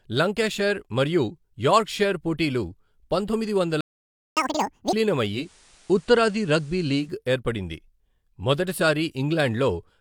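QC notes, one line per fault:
3.81–4.37 s, playback stall: right after "యార్క్షైర్ పోటీలు పంతొమ్మిది వందల" the sound drops out for 0.56 s, likely the player starving for data or getting blocked.
4.37–4.93 s, catch-up at higher speed: the backlog plays back at 2x, pitch jumping around ten semitones, chipmunk-style, until it has clawed back the lost time.
5.31–7.14 s, digital radio blending to analogue: a 0.2 s crossfade over to the FM feed brings in hiss roughly 30 dB down and shifts the level about 1 dB.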